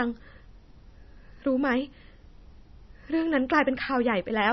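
Throughout the speech, the sound is dull and watery, with nothing above about 5.9 kHz and a swirly, chirping texture on s sounds. It is likely MP3 compression at a very low bitrate, around 24 kbps, cutting the treble and dropping weak frequency detail.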